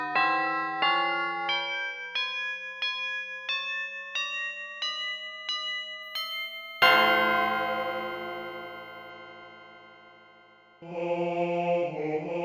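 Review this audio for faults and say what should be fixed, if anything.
Between 6.03 and 9.10 s there is imaging from linear upsampling. The audio was raised to a higher rate by straight-line interpolation between samples, which fits a 16 kHz source brought up to 48 kHz. That weak filter dulls the top of the original band and leaves a mirrored copy of the spectrum between 8 kHz and 16 kHz, roughly 30 dB below the signal, heard as a faint metallic shimmer on the brightest, hissiest parts of the sound. To prevent it, resample with a proper band-limited (windowed-sinc or polyphase) filter instead of linear interpolation.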